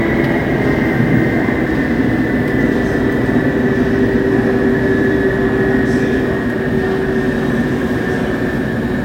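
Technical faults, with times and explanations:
Nothing technical to flag here; the sound comes through without any audible faults.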